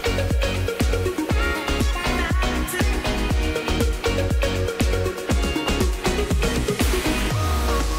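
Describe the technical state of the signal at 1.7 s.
Around 1.7 s the signal is intact, with no audible fault at that moment.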